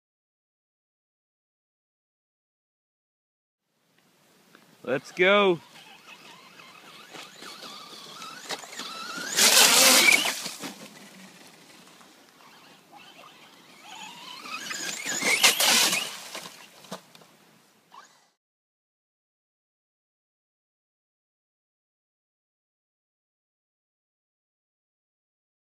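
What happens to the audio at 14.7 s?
A broken MP3 bit reservoir is the likely cause: frames went missing, so the next frame borrowed bytes belonging to another frame. From 14.70 to 14.73 s the audio skips forward and the borrowed data decodes as a brief garbled glitch, about one frame long, which fits a 26 ms MP3 frame.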